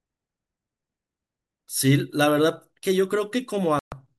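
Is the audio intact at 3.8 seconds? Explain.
No. A digital broadcast dropout runs from 3.79 to 3.92 s. The receiver stopped getting decodable frames, either because the signal was lost or because frames failed their checksum, so it muted its output until valid frames arrived again. The speech cuts to silence for about 128 ms in one unbroken hole, a length that fits roughly four lost frames, and then resumes further on. Whatever was broadcast during that gap is gone.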